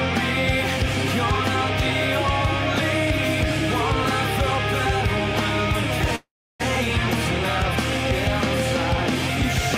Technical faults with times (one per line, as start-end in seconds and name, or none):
6.15-6.62 call audio freeze